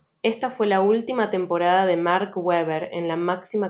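No technical faults can be heard in the speech, which arrives over a narrowband call path with nothing above 4 kHz, as fits G.711 mu-law coding.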